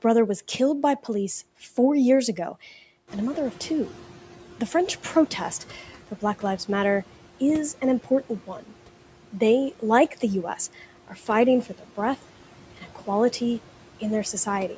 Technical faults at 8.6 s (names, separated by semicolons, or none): speech cut by the noise suppressor